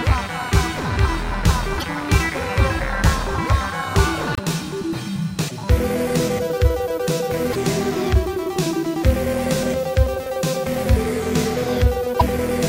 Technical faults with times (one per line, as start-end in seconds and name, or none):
1.79-1.83 broken MP3 bit reservoir
4.35-4.39 broken MP3 bit reservoir
5.47-5.52 broken MP3 bit reservoir
7.51-7.56 broken MP3 bit reservoir
12.19-12.22 broken MP3 bit reservoir